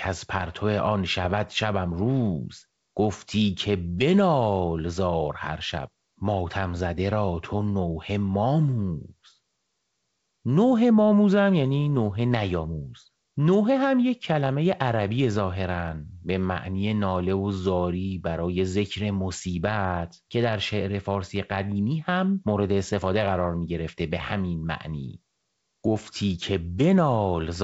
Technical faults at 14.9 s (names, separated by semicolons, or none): none